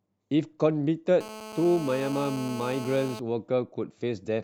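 From 1.21 s to 3.20 s the speech carries GSM phone buzz: a hard, raspy tone near 217 Hz, dense with harmonics and about 12 dB below the speech. A nearby 2G handset in a call pulses its transmitter at that rate, and the audio circuitry rectifies those bursts into a steady buzz.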